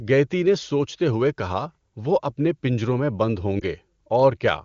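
Lost AMR speech frames at 3.60 to 3.64 s, after "اپنے پنجروں میں بند": the decoder replayed the last good frame's settings at reduced gain, giving a brief dip consistent with one lost 20 ms frame.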